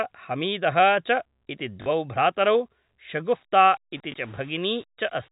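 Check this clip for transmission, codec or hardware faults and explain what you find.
Two faults turn up: brief packet-loss stutters and a gritty low-bit-depth texture in the second half, heard over the band-limited sound of the G.711 telephone path.

Packet loss with last packet repeated occurs at 1.82 to 1.86 s and again at 4.12 to 4.14 s. The first gap is 40 ms, the second 20 ms, which fits 20 ms packets. Instead of going silent, the receiver replays the last packet, so the longer gap gives a short robotic buzz near 50 Hz. Silence would mark a plain dropout instead.

Low bit depth without dither runs from 3.34 s to the end. The speech turns grainy, with distortion that follows the level and sits around 30 dB below the signal, likely from rounding to 7 bits. That is far coarser than G.711's faint noise, about 38 dB down.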